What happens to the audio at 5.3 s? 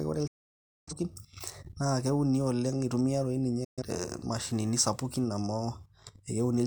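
At 5.3 s the speech carries on intact, with no dropout, click, distortion or other fault at that point.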